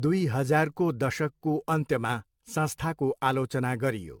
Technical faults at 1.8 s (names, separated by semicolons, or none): generation loss